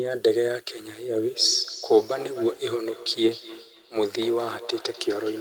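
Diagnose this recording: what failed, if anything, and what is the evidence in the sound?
Feedback echo between two devices, arising in call processing, runs from 1.24 s to the end of the speech. Each phrase returns after a fixed delay of roughly 300 ms, with the repeats peaking at about 15 dB below the direct speech and sounding thinner and more ringing than the original. A second device in the same room is playing this talker's audio, and that playback is captured again by the microphone. The local echo canceller only removes its own device's output, so this loop goes uncancelled.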